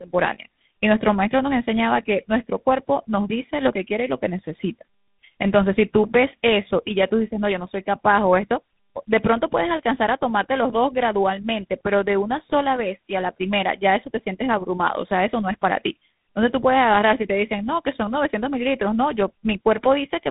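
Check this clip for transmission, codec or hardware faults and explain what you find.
There's one fault, and it runs through the whole clip: tandem speech coding. The speech sounds like it went through a GSM-style coder and then a G.726-type ADPCM stage, probably with a plain G.711 hop between them. Each stage re-encoded the previous one's damaged output, so the artefacts pile up. You hear rough, warbly speech that's more muffled than a single codec would leave it, with nothing above about 3.8 kHz.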